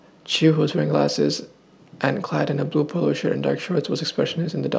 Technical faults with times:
none

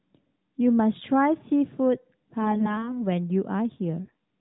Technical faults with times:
2.42-2.94 AMR bit errors
4.04-4.13 AMR bit errors

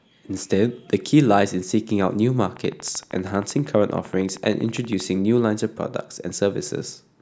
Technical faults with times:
2.57-5.01 train of clicks

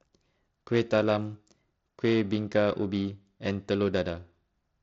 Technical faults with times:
0.00-4.82 periodic clock jitter

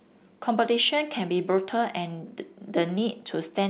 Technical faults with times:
none

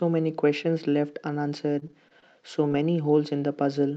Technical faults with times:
1.79-2.33 repeated packet loss (robotic sound)
2.68-2.72 short concealed packet loss

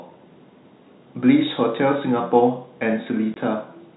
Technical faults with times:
3.34-3.36 packet loss filled with silence

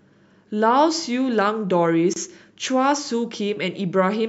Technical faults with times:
2.13-2.16 gap at a join of encoded pieces

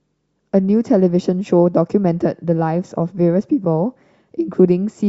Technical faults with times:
none

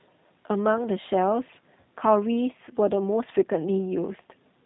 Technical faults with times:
0.00-4.65 G.729 codec

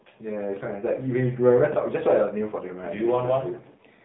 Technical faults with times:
0.00-4.05 AMR narrowband mobile codec
2.55-2.65 AMR bit errors

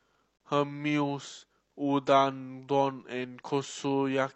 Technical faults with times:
0.37-0.40 gap between stream segments

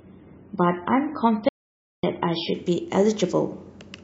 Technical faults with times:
0.00-2.54 adaptive stream starting at a low bitrate
1.49-2.03 audio dropout to silence

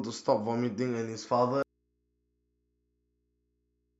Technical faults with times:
1.62-4.00 audio dropout to a faint residue

